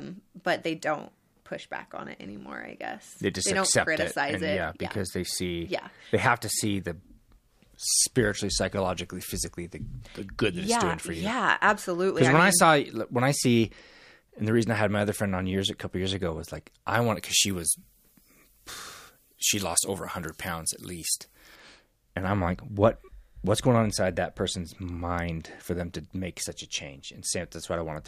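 From 16.94 to 21.55 s, after "years ago was like", pre-emphasis is left on: an FM-style 75 µs treble boost never got de-emphasised, so the speech turns thin and hissy, about 14 dB up at 10 kHz.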